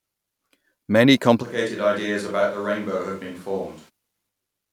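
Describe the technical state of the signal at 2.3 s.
At 2.3 s the speech sits inside a switch to a distant microphone, running from 1.44 to 3.88 s, likely because the close microphone dropped out and a farther one took over. The sound turns roomy, hollow and thinner, about 10 dB quieter, with a noise floor roughly 30 dB below the speech. The waveform shows an abrupt drop in amplitude at the start and an abrupt rise at the end, and the spectrogram shows weaker low frequencies and smeared, reverberant tails.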